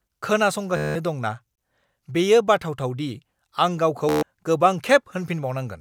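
At 0.77 s the speech breaks into a rapid buzz that lasts until 0.95 s. This is a Bluetooth stutter. The wireless link dropped audio data for about 187 ms. The receiver kept replaying its last short slice to fill the gap, which gives the machine-gun sound. The speech then picks up further on, as if it had kept playing. The same thing happens from 4.09 to 4.23 s, with about 133 ms lost.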